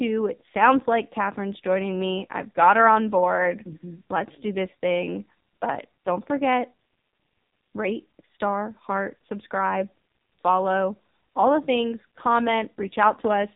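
AMR narrowband mobile codec damage runs throughout this speech clip: nothing passes above 4 kHz, and heavy vocal-tract modelling leaves a buzzy, synthetic tone that fits a low 5.9 kbps mode.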